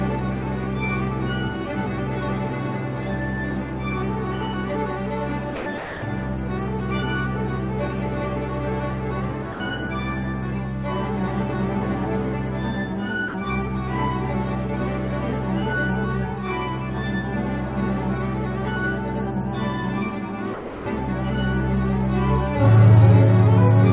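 At 5.56 to 5.66 s, 5.78 to 6.02 s, 9.52 to 9.6 s, 13.28 to 13.34 s and 20.54 to 20.86 s, the sound briefly gives way to flat, steady noise, then returns. This is likely sound dropped by the voice detector, with comfort noise filling each gap.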